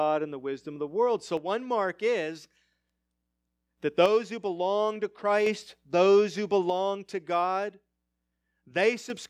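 The speech drops abruptly by about 6 dB from 1.37 to 3.77 s, 4.06 to 5.46 s (just before "those who") and 6.7 to 9.1 s (just after "those who"), with tone unchanged. This is likely one channel dropping out of an identical stereo pair, unlike a fade or filter.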